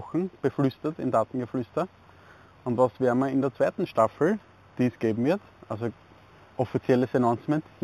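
Right from the start and all the way through, there's imaging from linear upsampling. The top of the band sounds dull, and above it sits a faint mirrored copy of the spectrum, landing around 4 to 8 kHz, roughly 35 dB below the main signal. That points to audio at an 8 kHz rate raised to 48 kHz by straight-line interpolation, which barely filters out the images. You hear it as a light metallic shimmer riding the top end.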